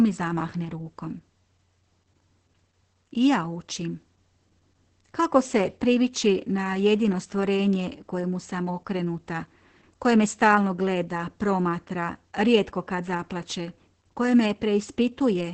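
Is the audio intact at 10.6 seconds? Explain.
No. At 10.6 seconds, as across the whole clip, the speech carries Opus voice compression: the SILK coder's coarse excitation, which fits a bitrate around 10 kbps, makes it hoarse and faintly robotic, with nothing above 8.6 kHz. A plain low-pass filter would only muffle the speech, without that rough texture.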